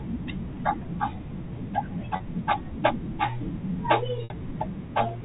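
At 2.16 s and again at 4.24 s, packet loss with pitch repetition occurs. The gaps last 40 ms and 60 ms. The receiver fills each by repeating the last pitch period, so the speech briefly holds a slightly buzzy tone in the first gap, while the longer second gap fades into silence before the speech returns with a short cross-fade. The telephone-band G.711 coding underneath carries at most a faint quantisation noise.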